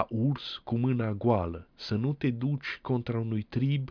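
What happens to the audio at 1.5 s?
Nothing audible goes wrong at 1.5 s; the speech carries on cleanly through that moment without any break, click or change in level or tone.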